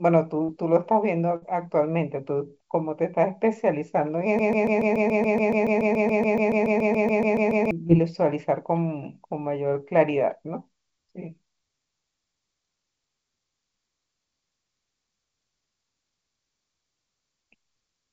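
A speech recording carried over a call path whose G.722 coding leaves nothing above 8 kHz, showing three kinds of fault. Short concealed packet loss occurs at 0.44 to 0.50 s and again at 7.88 to 7.91 s. Roughly 40 ms and 20 ms of audio failed to arrive in time, and the receiver patched each gap by extending the preceding sound before blending back, which leaves a brief smear or wobble. A burst of packet loss at 1.36 to 1.44 s removes about 60 ms. The concealment stretches the last sound into a decaying buzz or hiss for around 56 ms, then playback resumes with that stretch gone. From 4.39 to 7.71 s, a 142 ms fragment repeats back to back 23 times, a broken-record loop that most likely comes from a stalled player, encoder or stream resending its last buffer. The audio that belonged in those 3.3 seconds is lost.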